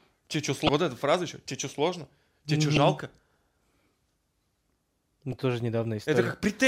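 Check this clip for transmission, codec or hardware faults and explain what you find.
There's damaged data in the compressed stream here, hitting three spots: 0.66 to 0.69 s, then 2.76 s and 5.32 s. Corrupted frame bytes throw the decoder off sync while it hunts for the next valid header, so each spot comes out as a brief glitch cutting into the speech.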